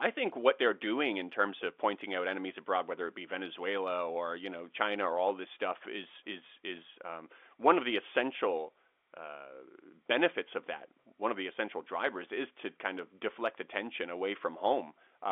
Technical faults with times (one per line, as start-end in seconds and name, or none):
none